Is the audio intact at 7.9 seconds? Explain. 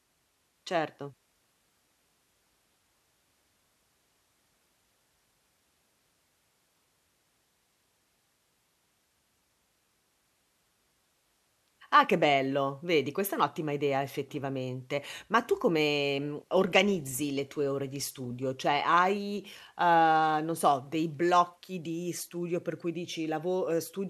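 Yes, the speech plays through cleanly at 7.9 seconds, with no dropout, click or other fault at that point.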